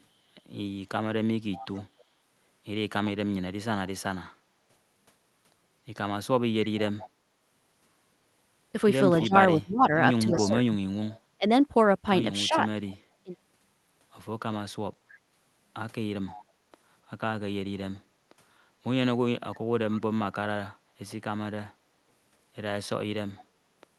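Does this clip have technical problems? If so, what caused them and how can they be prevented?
Yes. A faint repeat of the talker, delayed by 266 ms, roughly 20 to 30 dB down, appears from 1.52 to 1.84 s, 6.77 to 12.94 s, 16.27 to 16.43 s, 19.91 to 20.01 s and 23.36 to 23.44 s. This is likely an echo leak: a loudspeaker's output reached the far microphone and the echo canceller let part of it return. Prevention: use headsets, or lower speaker volume and keep the canceller adapted.

Between 9.23 and 13.31 s, while that echo overlaps the talker, the voice sinks in patches totalling about 1.5 s, at worst by around 35 dB. This is likely speech suppressed in double talk, where the canceller confused local speech with echo and attenuated both. Prevention: use a canceller with better double-talk detection, or headsets, so less echo needs suppressing.

From 16.52 to 16.63 s, just after an echo scrap, the room tone briefly drops about 15 dB and then returns. 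That is background gated by the echo canceller, which clamped the microphone hard while the loudspeaker was active. Prevention: tune the suppressor for gentler attenuation and add comfort noise.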